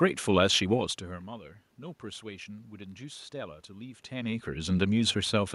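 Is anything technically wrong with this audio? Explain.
No, nothing is technically wrong.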